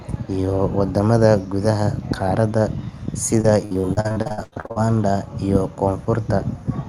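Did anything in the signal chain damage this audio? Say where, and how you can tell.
Yes. Repeated packet loss on the network leg of the call, from 3.41 to 4.78 s: sixteen gaps, the longest 83 ms, patched by stretching prior audio across roughly two fifths of that span, so the speech turns choppy and robotic with pieces missing, on a call path whose codec band-limits at 12 kHz.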